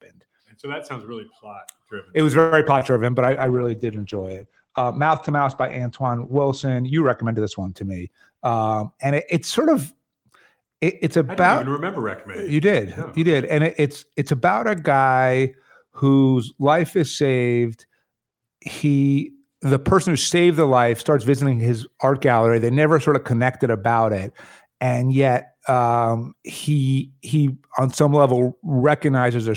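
At 2.39 s the speech stalls for about 0.12 s. The last sound is stretched as a fading buzz or hiss, then resumes. This is a call audio freeze, likely from held-up packets emptying the jitter buffer.

Short concealed packet loss follows at 2.66 s and 2.79 s. Each time, 20 ms never arrived, and the receiver patched it with a brief smeared continuation.

From 3.25 s to 8.59 s comes a call bitrate drop, from 32 to 12 kbps. Bandwidth narrows from 20 kHz to 8 kHz, so the sound turns muffled and rough. It stays at its lowest for about 2.8 s.

Between 8.00 s and 9.77 s a jitter buffer speed-up trims roughly 150 ms in small pitch-period pieces. Speech runs about 7% fast at unchanged pitch and sounds hurried.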